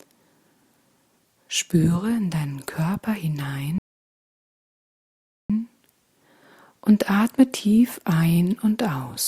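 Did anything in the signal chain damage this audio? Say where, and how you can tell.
Yes: a rebuffering stall at the playback stage, from 3.78 s to 5.50 s. The sound drops abruptly to silence and then picks up exactly where it left off, with no skipped material and no repeated fragment. About 1.71 s of dead time is inserted. That points to the player draining its downloaded buffer, halting output until more data arrived over the network, then continuing from the same position.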